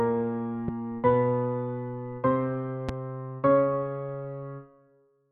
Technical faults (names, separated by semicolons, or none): loud pop